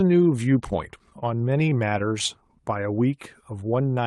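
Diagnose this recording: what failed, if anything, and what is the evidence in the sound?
Network and jitter buffer: repeated stalls (stutter) from 0.99 to 2.31 s. Thirteen holds of up to 17 ms extend the last sound, showing as duplicated waveform cycles, with nothing lost.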